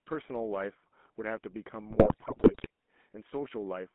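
A speech recording carried over a GSM full-rate codec throughout, with a burst of GSM bit errors from 1.9 to 2.67 s. The codec's mark is a constant buzzy, gravelly roughness laid over the voice. The encoder models the vocal tract and excites it with a sparse, regularly spaced pulse train, so fine harmonic detail is replaced by that grainy buzz. The band runs only from about 200 Hz to 3.5 kHz, which fits the 13 kbps full-rate scheme. What separates this from a plain narrowband telephone line is the roughness itself: a clean band-limited line sounds muffled but smooth, not gritty. Between 1.9 and 2.67 s the voice breaks into squawks, pops and gargling as corrupted filter, pitch and gain values reach the decoder, bending the spectrum and throwing the level around frame by frame. The damage is dense enough to suggest nearly every 20 ms frame in that stretch is hit. Unlike packet loss, there are no silent gaps or smoothed-over repeats. 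Instead the decoder keeps producing sound, just wrong sound, which is what gives bit errors their harsh, chattering character.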